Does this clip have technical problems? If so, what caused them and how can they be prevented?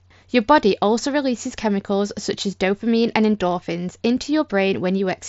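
No, there are no technical problems to report here.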